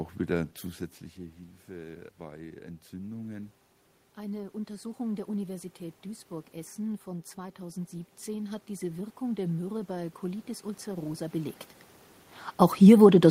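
From 1.16 to 3.59 s, and again from 4.16 to 11.65 s, automatic gain rising follows input drops of about 15 dB. The gain climbs by about 5 dB, then about 8 dB, so speech and room noise swell together. Waveform and spectrogram show a slow joint brightening, noise floor included.

From 12.61 to 13.08 s, automatic gain falling lowers the level by about 4 dB. The sound sinks along with its background, visible as a short downward taper across the whole spectrum.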